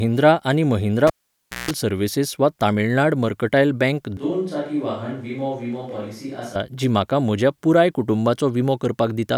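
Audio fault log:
1.07–1.71 s, cable pulled and plugged in: after "आनी महिंद्रा", a pop, about 0.58 s of near silence, then a 0.17 s 60 Hz buzz as the tip touches, and another pop.
4.17–6.56 s, switch to a distant microphone: after "वा तमिळनाड मर्कटायल बँक", sound turns suddenly roomy and hollow, thinner, about 5 dB quieter, with room noise roughly 30 dB below; likely a farther microphone standing in.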